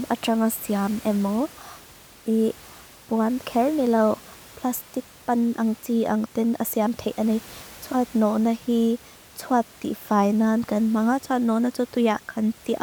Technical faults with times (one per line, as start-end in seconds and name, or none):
none